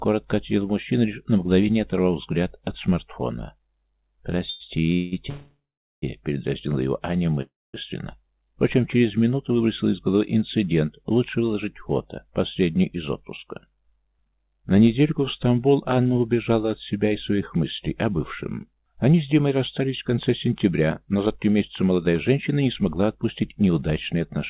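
From 4.5 to 5.14 s the audio shows repeated stalls (stutter): three short gaps, the longest 180 ms, where late packets emptied the jitter buffer and the receiver stretched the last sound. About half that span is concealed, so the sound drags and stutters without losing content.

Two call audio freezes follow, at 5.30 to 6.04 s and 7.42 to 7.75 s. Each time the last sound is held as a fading buzz or hiss that falls silent, for 410 ms and 220 ms respectively, then resumes where it stopped. The likely cause is packets held up in transit, which left the jitter buffer empty and inserted gaps of 725 ms and 318 ms.

From 16.96 to 24.39 s a jitter buffer speed-up plays the audio at 107 % speed, with pitch unchanged. The buffer had built up excess delay, so it trimmed short pitch-period pieces repeatedly, about half a second in total. The result sounds hurried. The content sits in a band limited to 4 kHz, which fits a G.711 mu-law call path at 64 kbps.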